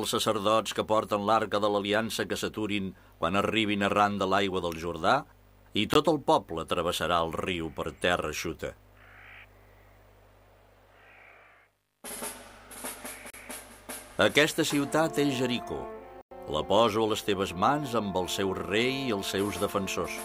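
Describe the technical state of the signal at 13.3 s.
The sound cuts to silence from 13.30 to 13.34 s, then resumes: likely a Bluetooth stall, the headphone buffer emptying while interference held up packets.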